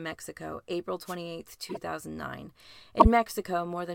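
At 1.05 s there's a wireless microphone noise hit, lasting until about 1.16 s. It's a quick swish of static. That's what you get when the radio link from an analogue FM mic fades because reflected signals cancel the direct one. The receiver loses its grip and its own noise comes up for about a tenth of a second.

Later there are two spots where frames play out of order, one from 1.69 to 1.77 s and the other from 3.00 to 3.06 s. In each, two neighbouring blocks of about 26 ms come out swapped, which fits single codec frames being decoded in the wrong sequence. You hear a brief garbled flutter. Nothing is actually missing; the timing is just scrambled for that instant.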